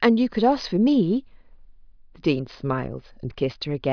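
No technical faults can be heard at any point in the speech recording; the signal stays continuous and intact throughout.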